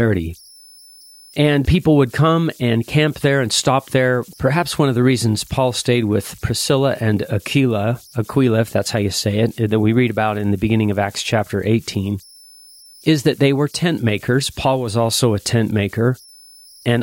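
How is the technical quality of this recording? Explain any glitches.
The recording has one fault running through the whole speech clip: converter idle tones. A tone near 5 kHz sits in the pauses, with grainy noise under quiet passages, about 31 dB below the speech. An undithered delta-sigma converter locks into repeating bit patterns when the input is small. These patterns produce that tone.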